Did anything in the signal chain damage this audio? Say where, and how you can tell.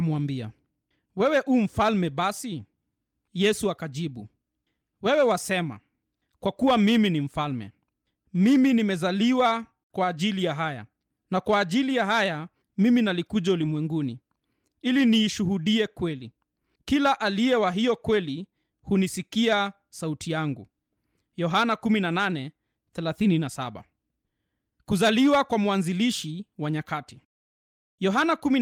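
Yes: lost packets rebuilt from error correction (network stage). At 13.61 to 13.75 s the speech turns rough and noisy without a gap, decoded from low-bitrate copies carried by the following packets.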